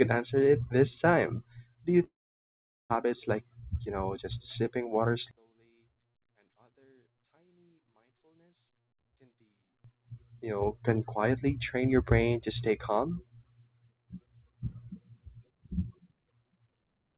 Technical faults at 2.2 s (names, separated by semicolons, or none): long network dropout